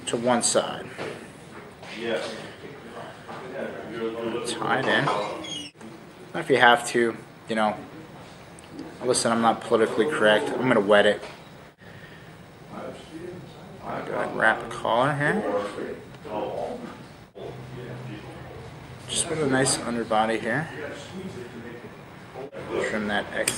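No technical faults can be heard anywhere in the clip.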